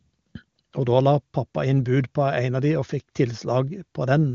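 No technical fault can be heard in this short speech recording. It carries the band-limited character of an AMR wideband (HD Voice) link, and the speech stays clear, which fits a high rate near 23.85 kbit/s where any damage from the codec is faint.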